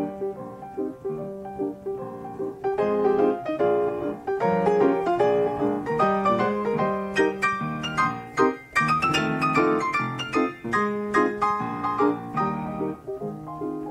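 Nothing stood out as a technical problem on listening to this audio.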